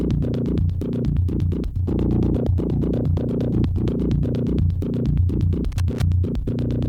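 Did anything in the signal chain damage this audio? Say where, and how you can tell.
Yes. Loose connector crackle in the analogue wiring, 5.72 to 6.02 s. Irregular scratchy bursts chop the music as a worn contact makes and breaks.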